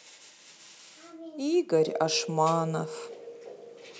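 From 1.09 s to 2.98 s the automatic gain rises: the gain control judged the input too quiet and raised it by about 8 dB, so speech and background swell together. On the waveform the envelope widens steadily; on a spectrogram every band brightens at once.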